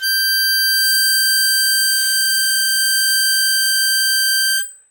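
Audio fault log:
Nothing to log here, since this music clip runs along without a single fault turning up anywhere.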